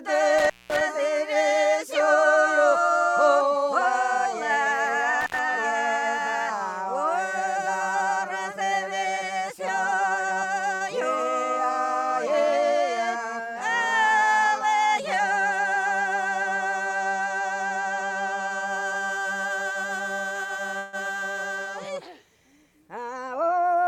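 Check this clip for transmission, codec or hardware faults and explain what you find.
Four kinds of fault turn up: two dropouts from a loose connection near the start and at about 5 s, then three jitter-buffer effects later on: a short stall, a brief freeze and a speed-up near the end.

Intermittent contact, 0.39 to 0.81 s and 5.21 to 5.39 s: the sound cuts out with crackle at each edge, leaving only faint hiss while it is gone, for about 200 ms the first time and about 70 ms the second. A cable or plug is briefly losing contact. The signal path opens, and the scraping of the contacts as they part and meet again makes the crackle.

Short stall from a late packet, 10.76 to 10.83 s: a sound hangs on unnaturally for about 47 ms, with a slight buzzy quality, and then the audio picks up exactly where it left off with nothing skipped. One packet arrived late, the jitter buffer ran dry, and the receiver stretched the last sound to cover the wait, adding 47 ms of delay.

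Call audio freeze, 20.78 to 20.96 s: the sound stops moving and turns into a held, fading buzz for about 153 ms, never quite reaching silence, then continues from the same point with nothing lost. The likely cause is a run of packets held up in transit, so that the jitter buffer emptied and the receiver extended the last sound until they arrived.

Jitter buffer speed-up, 22.88 to 23.55 s: the audio briefly sounds hurried, running at about 110% speed while the pitch stays the same. After the earlier hold-ups the buffer was holding more audio than it aims for. To reduce that delay, the receiver trimmed many tiny pitch-period slices in quick succession, taking out around 70 ms in total.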